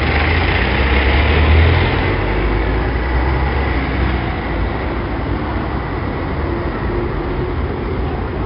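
4-bit ADPCM compression runs through the whole of this recording of sounds. Each sample is coded as a coarse 4-bit step from a predicted value, so a gritty hiss rises and falls with the level of every loud sound, and sharp attacks distort where the adaptive step size lags behind. The damage is heavy. Nothing is heard above 5.3 kHz, which points to a low sample rate near 11 kHz and fits a stream of about 44 kbps.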